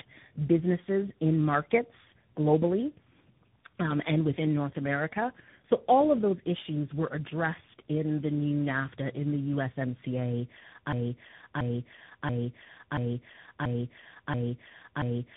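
Right from the start, the whole clip carries tandem speech coding. The speech sounds like it's been squeezed through about three speech coders in a row. Each one re-encodes the previous one's already damaged output, so the errors pile up. You get a rough, muffled, warbly voice with nothing above about 3.8 kHz. The final stage sounds like CVSD, adding its own roughness on top of the narrowband dullness.

At 10.93 s it turns into a broken-record loop. A chunk about 0.68 s long repeats back to back, seven times, right to the end of the clip. Whatever should have followed is simply gone. It's most likely the player or stream stalling and re-sending the last fragment it held, rather than anything in the original speech.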